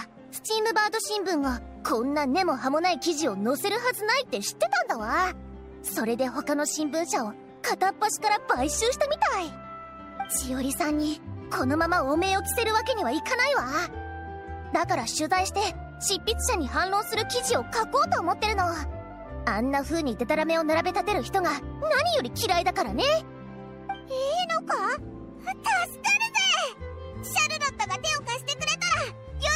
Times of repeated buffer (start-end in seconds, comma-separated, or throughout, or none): none